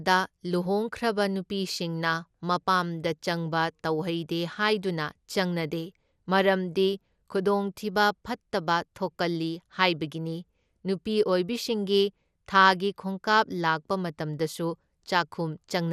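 From start to finish the speech sounds dull and gurgling, with a granular roughness riding on it and nothing above 14.4 kHz. The top band seems to flicker as detail drops in and out. This is plainly audible MP2 compression, likely at a rate around 80 kbps: Layer II divides the signal into sub-bands and, short of bits, switches off the upper ones and quantises the survivors coarsely.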